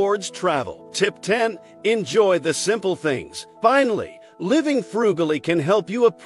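No technical faults can be heard anywhere in the audio. Nothing in the sound points to a broken stage in the chain.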